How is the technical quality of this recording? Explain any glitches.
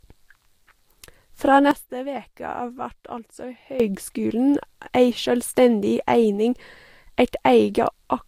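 The recording has two faults: one runs through the whole clip and one covers part of it.

Across the full length, the speech has no content above 16.6 kHz. The top end stops sharply there. The artefacts of a low-bitrate encode remain throughout, even though the file itself is stored at a high bitrate. This is likely low-bitrate audio saved at a high bitrate. The first encoder discarded detail and imposed the cut-off. The second, generous encode simply preserved that damage and could not restore anything.

From 1.71 s to 3.80 s there is a sudden gain jump. The level drops by about 13 dB at one instant and returns just as abruptly at the end. The speech and the background noise fall and rise together, which shows the change was applied to the whole signal. The likely cause is a digital gain setting switched without a ramp. Both edges are instant steps in level, not smooth fades.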